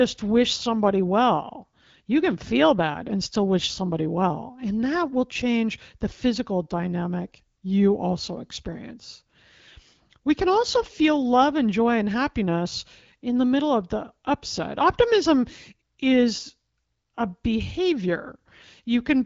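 No technical faults can be heard in this speech clip.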